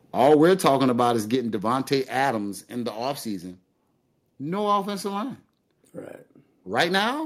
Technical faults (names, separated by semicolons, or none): microphone overload; microphone volume stepped down